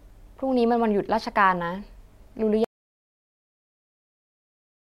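At 2.64 s the speech cuts to total silence through to the end, an audio dropout to silence, likely lost input while zeros kept being written.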